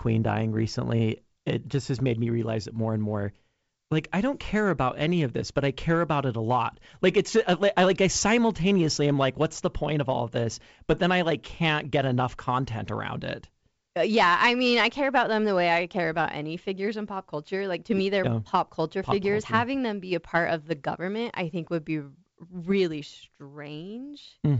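Speech coded with G.722 wideband telephone coding, its bandwidth reaching up to about 7 kHz in a way that fits the full 64 kbit/s mode, carries no audible technical fault.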